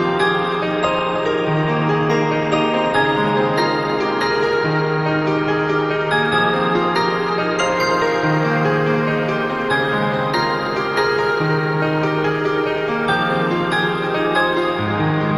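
From 8.28 s to 14.84 s, sample clock jitter sets in. The converter's clock wanders by roughly a microsecond or two, so samples land slightly off time. Steep, bright parts of the waveform suffer most. A gritty hiss rides the audio, roughly 40 dB below it.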